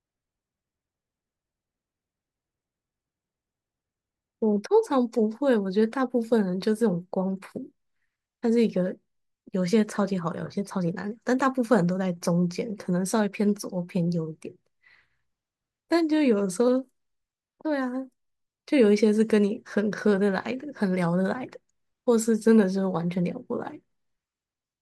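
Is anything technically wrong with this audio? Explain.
No, nothing technically wrong turns up anywhere in this speech recording.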